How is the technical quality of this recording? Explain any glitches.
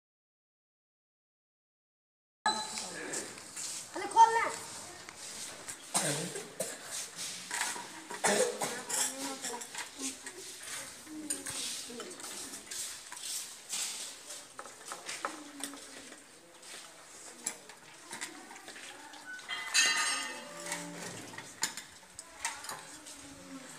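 The recording opens with an audio dropout to silence running from the start to 2.46 s. That stretch is silent with no room tone, so the input was likely lost, through a disconnected device, failed link or mute, while recording continued; sound then enters mid-flow.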